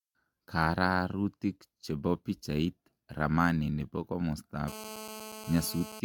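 Throughout, the speech sounds swirly, smeared and hollow, with blurred attacks and nothing above 17 kHz, likely generation loss from several AAC-LC passes at 96 kbit/s. From 4.68 to 6.00 s a steady GSM phone buzz appears: a hard, raspy 217 Hz tone with many harmonics, about 13 dB below the speech, from rectified call bursts.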